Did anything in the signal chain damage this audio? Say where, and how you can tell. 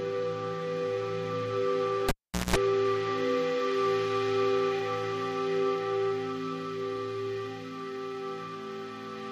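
Yes. A cable pulled and plugged in, from 2.09 to 2.56 s, in the analogue wiring. A pop cuts the sound to near silence for about 420 ms. Then 193 ms of 60 Hz mains buzz comes while only the plug tip touches, and a second pop brings the audio back.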